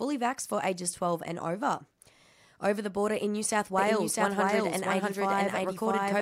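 At 3.78 s a doubled audio track begins and runs to the end of the clip: a second copy of the speech cuts in abruptly, trailing the original by roughly 0.7 s at about the same loudness. The likely cause is the same signal being captured again through a slower path. Unlike an echo or reverb, the copy does not decay, carries no room colouring, and stays full-band, so it sounds like two identical tracks overlapping out of step.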